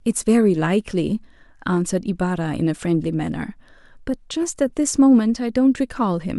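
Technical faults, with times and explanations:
4.69 s, corrupt frame decoded: flipped bits in one compressed frame reached the decoder, which played it without rejecting it, so misread gains and codes put energy at wrong frequencies for that frame, heard as a brief, faint chirp, squeak, blip or burst of noise in the speech, peaking near -45 dBFS.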